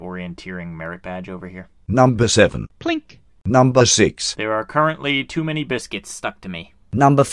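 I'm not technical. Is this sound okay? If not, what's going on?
No. From 5.81 s to the end at 7.32 s, the voice turns slightly higher and quicker, running about 1.09 times normal speed and about 1.5 semitones sharp. That's a wrong sample rate: because pitch and pace rise together, it isn't a pitch-only change.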